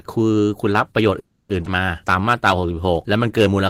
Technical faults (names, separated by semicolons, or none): call audio freeze; skip ahead; jitter buffer slow-down